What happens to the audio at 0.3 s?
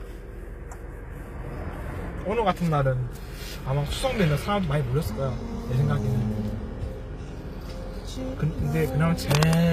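At 0.3 s the sound has nothing above 14.9 kHz, as throughout. This is likely low-bitrate audio saved at a high bitrate, so the missing top cannot return.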